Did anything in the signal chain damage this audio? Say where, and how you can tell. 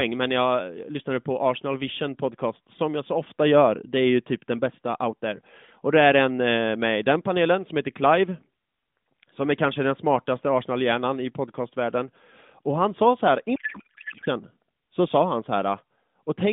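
Yes. At the codec stage, from 13.56 to 14.28 s, just after "han sa så här", the speech is replaced by garbled noise and warble that barely tracks it. This is a codec payload misread: the decoder accepts valid-looking AMR frames but takes its fields from the wrong bit positions, which fits octet-aligned packing being read as bandwidth-efficient. The narrowband AMR line, about 150 Hz to 3.6 kHz with light coding texture, is present on both sides of the fault.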